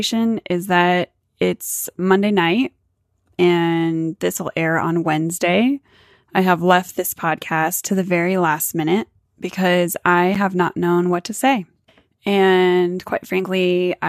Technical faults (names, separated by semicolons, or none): gap between stream segments